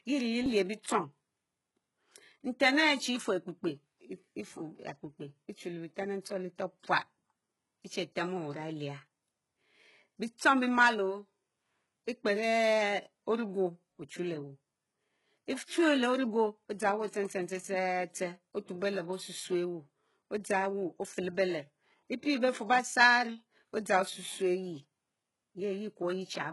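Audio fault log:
Throughout: heavy HE-AAC compression, likely near 12 kbps; nothing above 11.5 kHz, and the copied-up treble leaves s sounds gritty and metallic.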